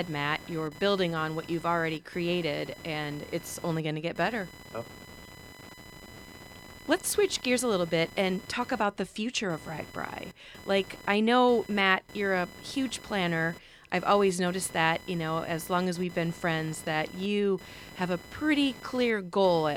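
Computer activity noise runs through the whole recording, a thin buzzing chirp sitting roughly 20 dB below the speech, with a pulse rate of around 1 kHz. It comes from the computer itself: as processor or graphics load shifts, the current drawn disturbs the ground that the audio circuit shares, and that disturbance leaks into the signal. Its rhythm follows the machine's workload rather than the talker, flickering and scratching independently of the speech.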